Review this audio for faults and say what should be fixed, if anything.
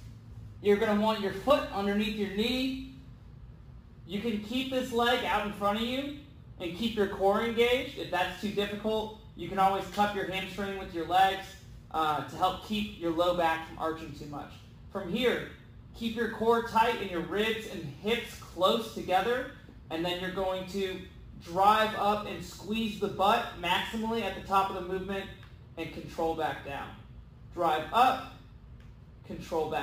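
Imaging from sample-and-hold upsampling runs throughout. Each sample was repeated with no smoothing filter, which points to a 24 kHz to 44.1 kHz conversion. A mirrored spectrum copy fills 12 to 24 kHz at about 23 dB below the signal, heard as bright metallic fizz. To prevent it, resample with a proper interpolating low-pass filter that removes everything above the original 12 kHz limit.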